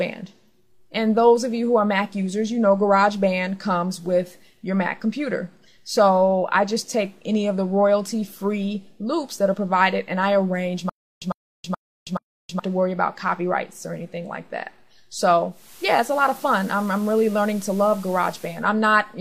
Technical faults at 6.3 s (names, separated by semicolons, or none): none